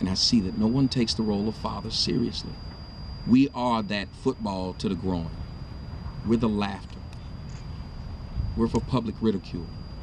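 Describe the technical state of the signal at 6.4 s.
At 6.4 s the signal is intact, with no audible fault at that moment.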